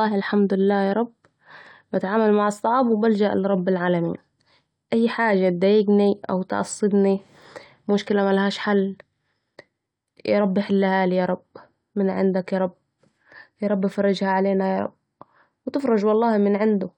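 No technical faults are audible at any point in this speech recording.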